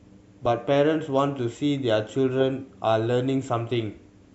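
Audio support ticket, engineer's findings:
No audible faults found in the speech recording; no component implicated, no action required.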